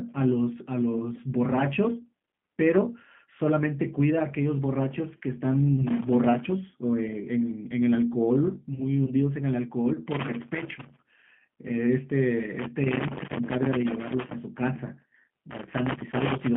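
Right from the start the whole clip has that G.729 sound: the speech is squeezed into roughly a 150 Hz to 3.4 kHz telephone band, and the codec damage is plainly audible as a rough, slightly synthetic texture. That's what you get when the voice is rebuilt from a vocal tract filter, a pitch predictor and a few pulses per frame instead of the real waveform. It all points to an 8 kbit/s G.729A link.

First up is a loose connector crackle from 5.87 to 6.52 s. It's an irregular scratchy burst laid over the speech, the kind a dirty or worn contact makes as it flickers between touching and not touching, chopping the signal and popping on any DC riding the line.

At 8.74 to 8.81 s there's VoIP packet loss concealed by the speech codec. About 30 ms of audio went missing, which fits a single lost packet. The decoder papered over the gap by carrying its last pitch and filter forward while fading the gain, so that bit is briefly stretched into a fading buzzy tone or coloured noise. 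Because each frame builds on the one before, the voice stays weak or distorted for a short while after the real audio comes back.

The crackle then returns three more times, each as the same ragged scratching: 10.11 to 11.19 s, 12.59 to 14.35 s, and 15.51 s through to the end of the clip.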